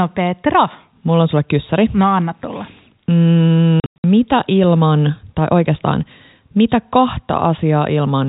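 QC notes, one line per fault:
3.80–4.04 s: packet loss filled with silence. About 200 ms of sound is lost across 240 ms, longest gap 100 ms, which fits 20 ms packets. The waveform shows flat silent stretches and the spectrogram shows blank vertical bands, just before "mitä ilman tai oikeastaan".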